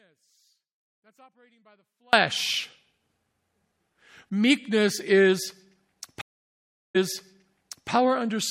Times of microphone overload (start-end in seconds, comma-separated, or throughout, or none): none